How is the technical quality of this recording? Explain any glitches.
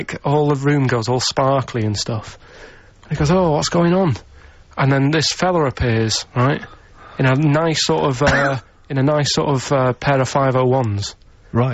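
No glitches are audible here.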